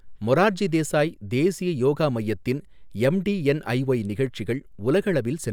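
There are no technical faults to describe at any point in this speech recording.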